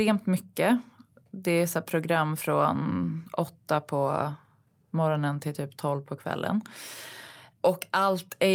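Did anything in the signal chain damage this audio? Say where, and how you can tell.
No, nothing in the signal chain damaged this audio.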